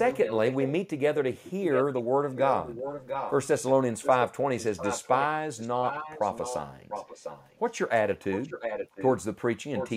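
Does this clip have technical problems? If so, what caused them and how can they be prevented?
Yes. An echo leak repeats the speech about 0.7 s late, roughly 5 to 10 dB down, at 0.06–0.72, 1.35–2.02, 2.34–3.46, 4.02–5.25, 5.57–7.71, 8.32–9.08 and 9.75 s to the end. The likely cause is a loudspeaker at the far end whose echo canceller missed part of its microphone pickup. A headset or a better-tuned canceller prevents it.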